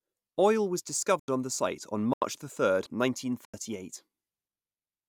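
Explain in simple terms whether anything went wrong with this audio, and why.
Blocks of digital silence occur at 1.20, 2.13 and 3.45 s, each about 85 ms long. The first falls just before "on the site on" and the second just after it. Each time, the playback program probably didn't refill its output buffer in time, which fits a 4096-sample buffer. The sound drops abruptly to nothing and snaps back.

Damaged data in a compressed stream appears from 2.83 to 2.86 s as a brief blip. Part of the compressed data there was corrupted, so the decoder misread those frames, lost its place and skipped ahead to the next readable point.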